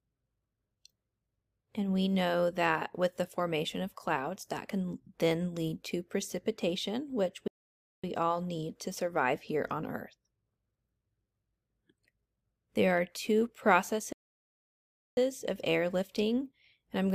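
At 7.48 s the sound cuts off mid-flow into silence for about 0.56 s, then returns at 8.04 s; a second, longer gap runs from 14.13 s to 15.17 s, roughly 1.04 s. Both are playback stalls, likely caused by the player running short of buffered data or having its output thread blocked, so nothing reached the output until it caught up and carried on.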